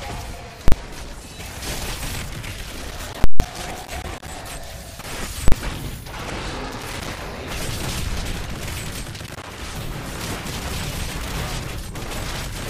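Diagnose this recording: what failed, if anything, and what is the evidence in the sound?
Three hard, loud digital bangs come from a processing stage whose calculation produced infinite or invalid numbers. These invalid numbers at full scale were clamped to the largest positive or negative value for a whole block. The 40 ms blocks at 0.68 to 0.72 s and 5.48 to 5.52 s each land as a single bang. The 160 ms block from 3.24 to 3.4 s is heard as a loud pop at each edge with nothing between, because a flat full-scale level carries no sound.

Irregular scratching and crackle bursts run from 2.9 to 4.29 s, 6.68 to 7.2 s and 9.16 to 9.48 s. This is loose connector crackle in the analogue wiring: a worn or dirty contact makes and breaks rapidly as it moves, chopping the signal and producing uneven bursts rather than steady noise. The first burst overlaps the 3.24 s full-scale block, but the two come from separate stages.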